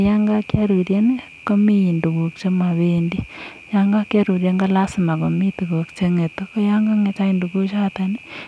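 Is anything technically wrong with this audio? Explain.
No, nothing is technically wrong with this audio.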